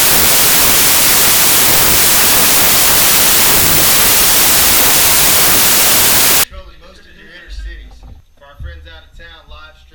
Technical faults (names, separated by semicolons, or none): wrong sample width